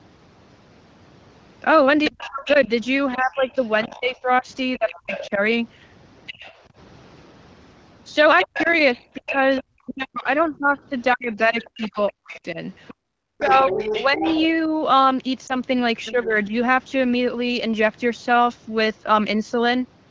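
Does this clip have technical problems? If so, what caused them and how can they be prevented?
Yes. Other side's voice leaking through appears at 2.04–5.3 s, 6.26–6.55 s, 8.39–9.61 s, 11.33–14.48 s and 16.05–16.28 s, as a second voice about 10 dB below the talker in the longer stretches and about 20 dB below in the short ones at 6.3 s and 16.1 s. The likely cause is a loudspeaker on the talker's device playing the far end back into the microphone, with the echo canceller leaving part of it in place. Using a headset, or a better-tuned echo canceller with more loudspeaker-to-microphone isolation, would prevent it.

Speech suppressed in double talk occurs at 2.1–5.4 s, 8.45–14.23 s and 16.12–16.52 s. The talker's level dips by up to about 30 dB in the first span and up to about 40 dB in the second, and loses around a second and a half and three seconds of audio respectively. The last dip is brief and shallow, about 10 dB. 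This likely happened because both sides spoke at once and the echo canceller, unable to separate the local talker from the echo, turned everything down. A canceller with stronger double-talk detection, or a headset that removes the echo path, would avoid it.

Lost AMR speech frames cause a short dip or warble at 15.47–15.55 s, which fits a single 20 ms frame failing after radio errors. The AMR-WB decoder, running at 15.85 kbit/s, filled the gap by repeating the previous pitch and vocal tract settings at falling gain, then recovered weak or rough for a moment. Better radio coverage or stronger channel protection would prevent it.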